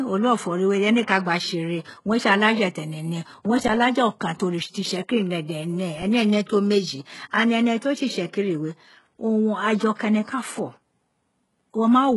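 Throughout, the speech has gritty, metallic treble with sibilants turned lispy, and nothing is present above 11.5 kHz. This heavy damage is likely HE-AAC compression at a rate that fits roughly 12 kbps: only the lower band is coded, and spectral band replication copies it upward to stand in for the lost treble.

At 3.68 s the sound freezes for 12 ms, as a flat stretch held at the last level. This is an underrun with held sample. The output buffer ran empty, the converter held its final value, and roughly 10 ms of audio was skipped when playback resumed.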